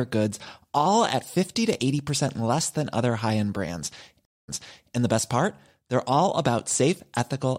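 Just after "other high end brands", at 4.25 s, the speech drops out for about 0.23 s, then picks up again 0.46 s earlier, repeating a moment already heard, through 4.94 s. This is a stream reconnect: the connection broke, the player restarted its decoder mid-stream, and the server resent recent audio.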